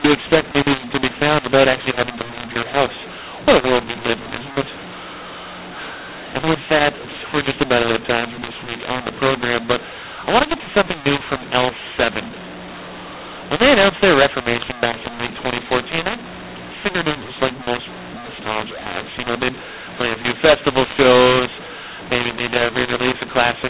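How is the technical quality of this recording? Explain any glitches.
The recording is seriously degraded by a single fault that runs through the whole speech clip, laid over the narrowband sound of G.711 telephone coding, which cuts everything above 4 kHz, consistent with 8 kHz telephone sampling.

mu-law and A-law mixed up, from start to finish: the speech was encoded with the mu-law curve but decoded as A-law, so each 8-bit code maps to the wrong amplitude. Levels are scrambled: some samples come out too loud, others too soft, and near-silent samples are pushed well above zero. The result is harsh, gritty distortion on the speech, and the pauses fill with noise instead of falling quiet.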